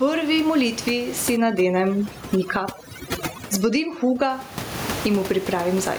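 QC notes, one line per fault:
Throughout, gain pumping: levels swing by around 20 dB, so the speech sounds squashed and flat. The likely cause is input gain set far too high, with a fast limiter clamping down on peaks.
1.37 to 4.30 s, overdone noise removal: the background drops and breaks up into twinkling specks. A noise reducer set too strong is switching off individual frequency bands near its noise estimate, taking quieter parts of the speech with them.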